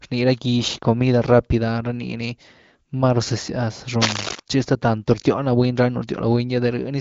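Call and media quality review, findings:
Cable scratch noise, 4.00–4.40 s, just before "tchi hasta tanto rtyóhny": dense, uneven scratching about as loud as the speech. Likely a worn cable or connector moving, with rapidly changing contact resistance.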